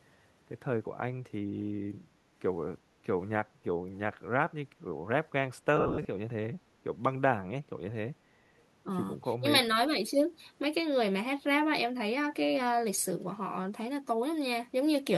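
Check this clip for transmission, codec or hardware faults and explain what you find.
Three faults are audible in the speech: a burst of lost LE Audio frames, a brief echo leak, and a short dip from speech suppressed in double talk.

From 5.77 to 6.05 s, lost LE Audio frames break up the speech. About 180 ms of audio is missing, scattered over 280 ms, with the longest gap around 70 ms. That total fits eighteen 10 ms frames. For each missing frame, the LC3 decoder repeated the last good spectrum with randomised signs, so the sound turns into a hissy, smeared version of the preceding voice rather than falling silent. The concealment then fades over the longer gaps. Dropout into digital silence, by contrast, would leave clean holes with no noisy fill.

At 8.59 to 8.64 s there is a very faint delayed copy of earlier speech, roughly 40 dB below the talker and arriving 365 ms late. This is likely an echo leak. 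A loudspeaker on the far side fed its microphone, and that side's echo canceller let a sliver through. The fixed lag distinguishes it from reverberation, which would trail directly off the original sound with no gap.

Between 9.39 and 9.45 s the voice briefly ducks, by up to roughly 15 dB, over about 70 ms. This is likely speech suppressed in double talk. Both ends spoke at once, and the echo canceller, unable to separate the local talker from loudspeaker echo, attenuated everything. Because the voice dips as a whole and no noisy fill appears, it sounds different from the frame loss earlier, and its brevity sets it apart from a deliberate mute.

Light lossy compression also runs through the clip.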